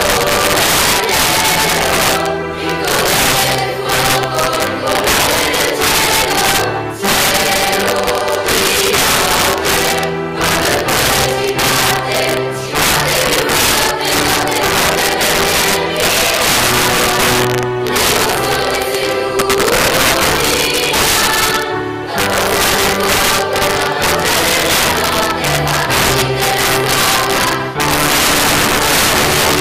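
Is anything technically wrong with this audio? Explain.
Yes, there's integer overflow throughout: gain pushed about 9 dB too hot wraps peaks to the opposite sign instead of limiting, so roughly one sample in twenty snaps into harsh cracks on loud moments.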